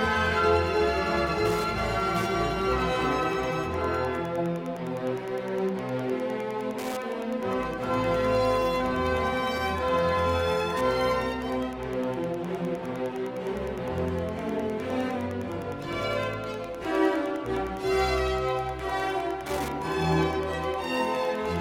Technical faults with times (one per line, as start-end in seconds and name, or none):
0.00-21.61 Wi-Fi interference